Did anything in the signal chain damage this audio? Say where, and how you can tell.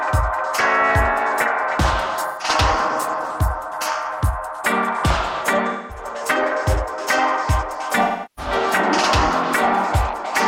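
Yes. Smeared, noisy patches at 2.27–2.47 s, 5.68–6.05 s and 8.03–8.52 s point to AAC frame loss with concealment at the codec stage. The decoder filled about 128, 213 and 341 ms of missing frames by reusing the last good spectrum.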